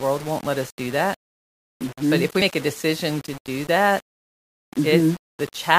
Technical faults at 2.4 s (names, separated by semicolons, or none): low bit depth without dither; damaged data in a compressed stream